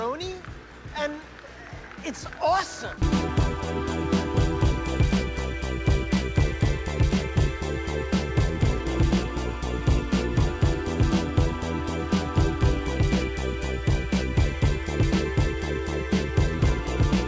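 Nothing goes wrong anywhere in the clip, and the only thing you'd notice is that the sound came over a call link, with nothing above 8 kHz, which fits a G.722-style wideband codec.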